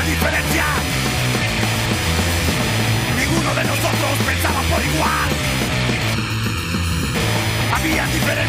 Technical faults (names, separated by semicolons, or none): computer activity noise; channel delay (comb filtering)